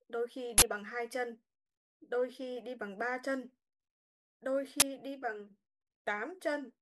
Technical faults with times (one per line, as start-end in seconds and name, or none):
0.58-0.62 uninitialised buffer
4.80-4.82 uninitialised buffer